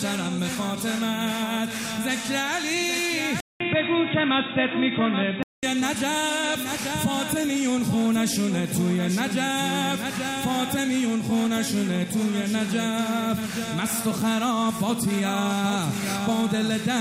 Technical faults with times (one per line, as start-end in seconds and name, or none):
3.40-5.63 input switched to a poorer device